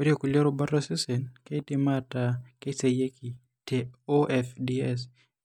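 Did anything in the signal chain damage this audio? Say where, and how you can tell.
Yes. CD scratch ticks run from 1.97 to 3.38 s: seven short ticks spread evenly through the speech at about five per second, each no longer than a millisecond or two. The damage is at the storage and playback stage. A blemish on the disc wipes out more data than error correction can rebuild, once per revolution, and the player fills each gap by interpolating or muting. That steady, rotation-locked rhythm is what sets these apart from random clicks.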